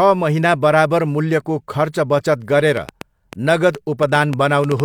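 Interference from nearby equipment or a faulty connection or power supply is the likely source of the fault in this speech recording: a train of clicks runs from 2.77 s to 4.81 s, starting just after "खर्च बचत". Around ten sharp pulses of much the same shape arrive at roughly five per second, unevenly spaced, peaking about 10 dB above the speech. They are heard as irregular ticking and popping laid over the sound, carrying on through the pauses as well.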